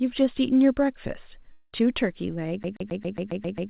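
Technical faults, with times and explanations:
1.52–1.75 s, long network dropout: about 0.2 s of audio likely went missing, and the receiver filled the gap with a fading continuation of the last sound. On the spectrogram this shows as a smeared, decaying band with no fresh detail.
2.63–3.69 s, CD stuck on one turn: the same 135 ms slice repeats about ten times with a brief mute at each jump. The waveform shows identical blocks separated by thin gaps, heard as a rapid, even stutter.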